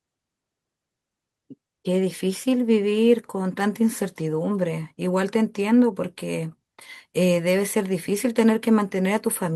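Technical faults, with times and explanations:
No technical faults are audible in this speech recording.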